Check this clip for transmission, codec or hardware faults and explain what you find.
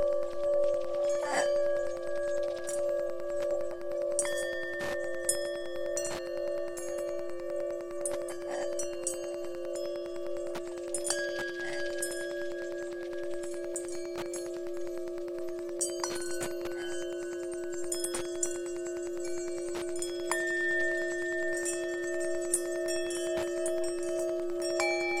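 One hardware fault runs through the whole clip.

Wi-Fi interference, throughout: the audio circuit rectifies a nearby radio's 102.4 ms beacon, giving steady ticking about ten times a second, roughly 20 dB down.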